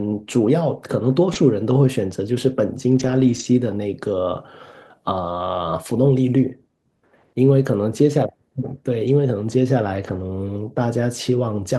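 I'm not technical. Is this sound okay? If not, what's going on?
No, not entirely. It's a speech recording from a call, and a few bits of the connection dropped out along the way.

The first problem is a short concealed packet loss at 1.33 to 1.37 s. A tiny slice of the call, about 20 milliseconds, never arrived in time. The receiving end papered over it by stretching the sound that came just before, so you get a quick little smear or wobble there.

The second problem happens several times: a lost packet rebuilt from error correction. Each chunk of audio carried a rough backup copy of the previous one, so when a chunk went missing the backup filled in. Nothing goes silent, but those stretches sound grainier. It happens at 1.35 to 1.37 s, 2.91 to 3.45 s (the longest, about 0.28 seconds rebuilt in all), 5.27 s, 7.91 to 7.93 s, 9.07 to 9.09 s, and 10.03 to 10.21 s.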